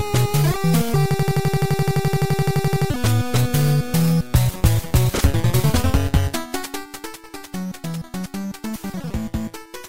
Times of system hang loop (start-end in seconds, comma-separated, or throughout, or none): 1.11-2.90